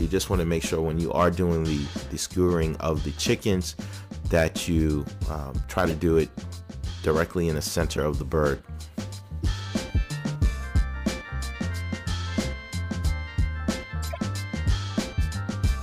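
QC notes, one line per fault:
2.33–2.36 s, 5.88–5.92 s, 7.96–7.99 s, 9.43 s and 14.03–14.18 s: corrupt frame decoded. Damaged bits in compressed frames were decoded as though valid. Misread gains and codes put energy at the wrong frequencies, so each event is a short chirp or burst of noise lasting only as long as the bad frames. The longest, at 14.03 s, suggests several consecutive frames hit. The errors peak around -15 dBFS at 5.88 s and 7.96 s, and are quietest near -30 dBFS at 9.43 s.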